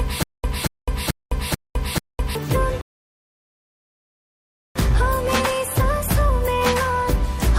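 Right from the top, and already going when the clip starts, there's a stutter with silent gaps running to about 2.35 s. A 229 ms fragment plays, then 209 ms of dead digital silence, and it repeats on a steady 438 ms cycle, five times over. That pattern is likely a player or stream stalling and replaying its last chunk on each retry before running dry, so whatever should have filled that stretch is simply gone.

Then at 2.81 s the sound drops out completely and stays silent until 4.76 s, a rebuffering stall of about 1.94 s. This time the player just ran out of downloaded audio and waited for more to arrive. When it comes back, it picks up exactly where it cut off, so nothing is missing. The clip just gets stretched by that pause.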